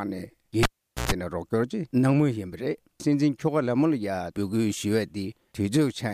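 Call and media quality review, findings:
Cable pulled and plugged in, 0.63 to 1.12 s. Pop at dropout, about 435 ms near silence, roughly 120 ms of 60 Hz mains buzz while the plug tip alone makes contact, second pop on reconnect. Likely a live cable pulled out and pushed back in. Waveform shows a spike, a flat gap and another spike. Spectrogram shows broadband vertical lines at both pops and a 60 Hz line with harmonic stripes during the buzz.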